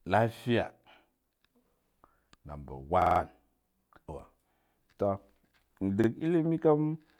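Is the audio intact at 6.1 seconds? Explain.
No. Just before 6.1 seconds, from 6.04 to 6.08 s, a short stretch of the speech plays twice with a hard join, heard as a brief stutter. This is a repeated buffer: fresh audio arrived late, so the device replayed its last 46 ms block, which fits a 2048-sample buffer. Essentially nothing was lost.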